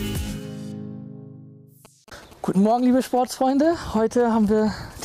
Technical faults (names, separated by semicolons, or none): GSM signalling bursts